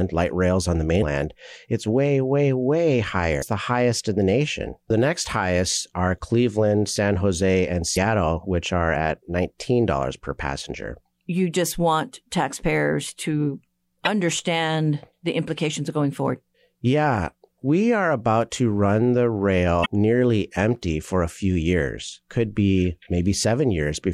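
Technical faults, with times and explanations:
0.98–1.03 s, 3.39–3.43 s, 7.93–7.97 s, 14.05–14.08 s and 19.82–19.86 s: damaged data in a compressed stream. Brief glitches, 26 to 48 ms long, break into the speech. Corrupt bytes make the decoder misread frames and lose sync.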